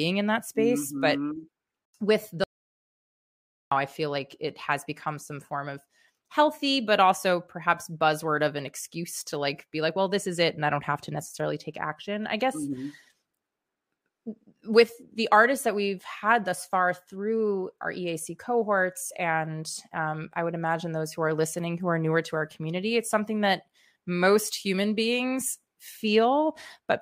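A speech recording in which the sound cuts off abruptly at 2.44 s and returns at 3.71 s, leaving about 1.28 s of dead silence with no room tone. This audio dropout to silence most likely came from a lost input while recording continued writing silence.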